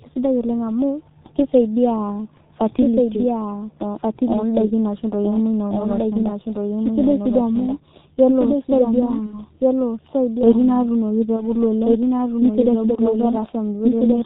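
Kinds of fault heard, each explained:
Doubled audio track: A second full-band copy of the speech runs about 1.5 s behind the first, roughly 5 dB quieter, with no decay or room colour. That sets it apart from an echo or reverb tail. The likely cause is a duplicated capture path or an edit holding two copies.
G.723.1 codec: The speech is heavily muffled and hoarse, with nothing above 4 kHz and smeared consonants, which fits this early telephony codec running at about 6 kbit/s. Its slowly updated voice model gives a rough, hoarse quality, unlike the plain dullness of simple low-pass filtering.
VoIP packet loss concealed by the speech codec: At 9.26–9.39 s and 11.36–11.48 s the speech turns into a short, fading extension of the preceding sound. Each gap points to one lost 30 ms frame, and the distortion lingers after it, unlike a clean dropout or click.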